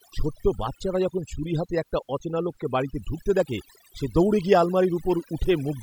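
Throughout, overdone noise removal mutes individual frequency bands near the noise floor, leaving twinkling specks in near-silent gaps, unlike codec smearing or dulling.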